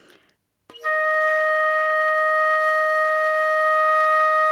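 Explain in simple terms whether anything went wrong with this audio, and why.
Gain pumping runs through the whole clip. The recording level was likely set far too high, so an automatic level control keeps pulling it down whenever something loud happens. Loud and soft parts end up closer in level, leaving the sound squashed.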